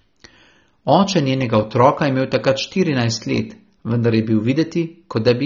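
From start to finish the speech carries plainly audible AAC compression damage. The top end is dull and cut off early. Sibilants turn fizzy and smeared. Sustained vowels warble. Some bands sound hollow or filled with grainy noise. The likely cause is AAC-LC encoding at a low bitrate, around 24 kbps. At that rate the encoder drops high frequencies and starves quieter parts of the spectrum of bits.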